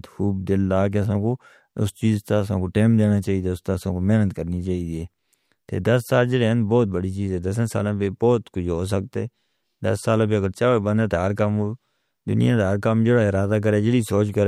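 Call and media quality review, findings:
Clock slip clicks: faint regular ticks roughly every half second, 0.37 to 14.14 s. Single-sample slips, likely two unsynchronised device clocks drifting around 40 ppm apart.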